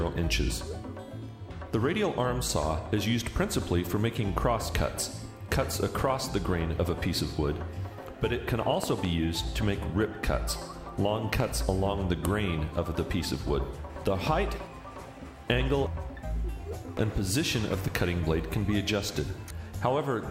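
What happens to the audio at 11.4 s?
At 11.40 to 11.42 s a single loud pop cuts in, peaking about 15 dB above the surrounding sound, which carries on underneath. It is likely a brief voltage pulse, from a plug, switch, static discharge or driver glitch, added to the signal and shaped by the downstream circuitry.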